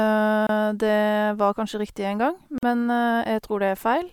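A speech clip with two gaps at joins of encoded pieces. Silence cuts into the running speech from 0.47 to 0.49 s, about 25 ms, and again from 2.58 to 2.63 s, about 46 ms. The codec smears the edges of each gap. The speech then resumes exactly where it stopped. The pieces were encoded separately and joined untrimmed. Each encoder's start-up delay and last-frame padding were left in as dead air.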